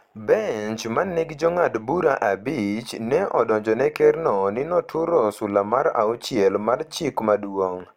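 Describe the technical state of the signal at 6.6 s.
At 6.6 s, overlap-add ripple runs through the speech across the whole clip: mismatched frame overlap swings level about 6 dB around 100 times a second, giving a steady, regular metallic buzz rather than irregular dropouts.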